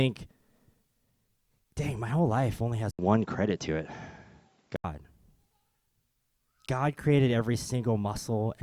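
Speech; after "my whole life only", the sound from 2.91 to 4.84 s turns dull, with an 80 ms gap, nothing above 7.6 kHz and a level step of about 5 dB, likely an input switched to a poorer device.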